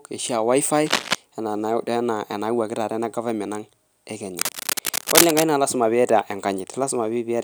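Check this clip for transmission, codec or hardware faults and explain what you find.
Cable scratch noise, at 0.86 to 1.15 s and 4.27 to 5.44 s, is likely a worn cable or connector shifting contact resistance, giving rough rustling bursts about as loud as the speech.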